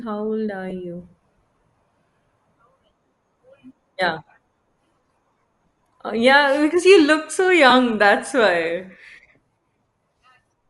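Throughout the speech there is plainly audible coding damage, most likely Bluetooth LC3 compression. The upper spectrum has a breathy, grainy texture where the transform codec has thrown away high-frequency detail and filled the gaps with shaped noise. The character points to LC3 running at a moderate rate around 48 kbps with 7.5 ms frames, where the high band is rebuilt rather than coded.

At 0.70 s, just after "how old are", a brief smear breaks the voice: lost LE Audio frames. The decoder covered the gap by repeating the previous spectrum with scrambled phase, so the voice turns noisy for an instant instead of dropping out. The gap's length fits a single 7.5 ms frame.

The same fault returns from 7.70 to 7.72 s, between "because you look so" and "that's why". This gap is longer and fits two consecutive frames of about 15 ms in total. The concealment again reuses the last spectrum with random signs, and the speech blurs into a short grainy hiss rather than a click or a silence.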